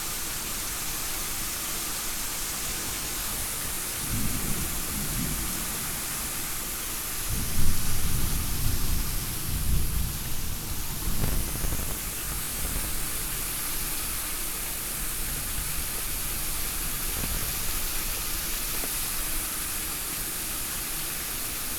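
Processor overload crackle hits this recording of sounds from 2.68 to 3.96 s, from 11.20 to 12.89 s, and briefly from 17.17 to 17.41 s. In each stretch the processor falls behind on its small audio buffers, around 10 ms each, and misses dozens of deadlines in a row in the two longer bursts. Every miss replays a scrap of old audio with hard edges, so the sound turns gritty and torn until the load eases.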